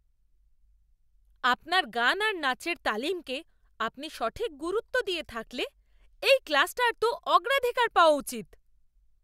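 No audible technical faults anywhere in this speech recording.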